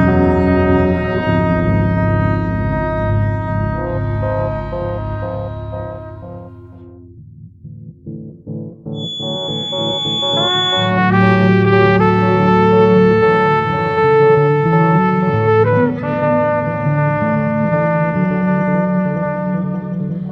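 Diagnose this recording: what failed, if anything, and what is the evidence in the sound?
The acoustic loop from loudspeaker back to microphone was likely sitting right at the edge of feedback, with enough gain to sustain one frequency but not enough to run away into a howl. From 8.91 s to 10.95 s a feedback whistle rings at a single pitch of 3.4 kHz, around 5 dB under the sound, a thin steady tone that swells and fades slowly in level without growing into full oscillation.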